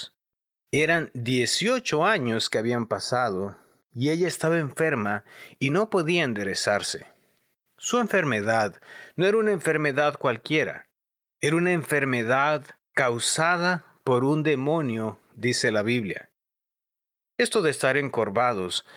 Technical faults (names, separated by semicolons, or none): channel delay (comb filtering)